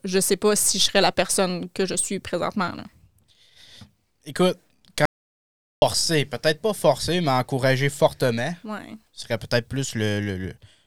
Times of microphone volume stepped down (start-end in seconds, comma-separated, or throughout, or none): none